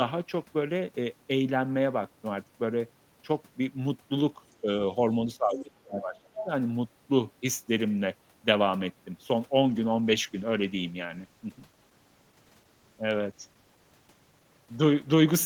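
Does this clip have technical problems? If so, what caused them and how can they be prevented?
Yes, three kinds of fault can be heard.

Other side's voice leaking through: a second voice appears at 4.5 to 4.55 s (barely audible), at 5.58 to 5.62 s (clearly present, though well below the talker) and at 6.36 to 6.45 s (fairly strong). It is likely caused by the talker's loudspeaker feeding the microphone, with the echo canceller missing part of it. Unlike crosstalk or background chatter, these scraps are short and cluster while the remote side is active. Using a headset, or lowering loudspeaker volume so the canceller can converge, would prevent this.

Speech suppressed in double talk: the talker's level dips briefly and shallowly at 4.61 to 4.69 s. Then from 5.37 to 6.49 s it drops deeply, close to silence, for about a second. This is likely the echo canceller muting everything while both sides spoke at once. 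A packet-loss dropout cuts out abruptly and at random, but this loss comes as level ducking that lines up with the leaked far-end voice around it. Headsets, or a canceller tuned for full-duplex double talk, would prevent it.

Call bitrate drop: from 9.66 s to the end, the sound turns rougher and duller as the encoder rate falls from 32 to 14 kbps and stays at its lowest for about 4.5 s. A poor microphone would sound muffled from the start, but here the sound changes at one moment and the coarse, watery coding texture stays through to the end. A more stable network connection, or a higher minimum bitrate, would prevent it.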